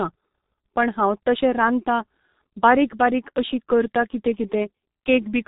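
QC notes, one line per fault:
throughout: G.723.1 codec. The speech is dull and hoarse, with nothing above about 3.8 kHz and consonants smeared together. That heavy damage fits this low-rate telephony codec at roughly 6 kbit/s, working in coarse 30 ms frames with a slowly updated voice model.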